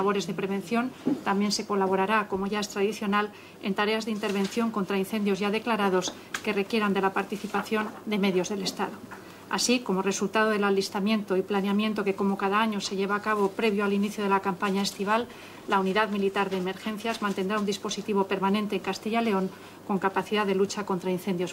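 No technical faults can be heard anywhere in the recording.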